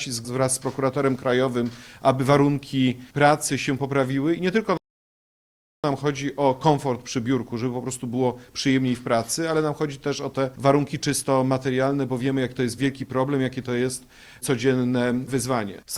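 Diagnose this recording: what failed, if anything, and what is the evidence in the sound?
The failure is at the playback stage: a rebuffering stall. At 4.77 s the sound drops to dead silence and stays there until 5.84 s, then picks up exactly where it left off, with nothing skipped or repeated. That's the player running dry on downloaded audio and waiting for more to arrive. No content is lost, but the gap pushes everything after it about 1.07 s later than it should be.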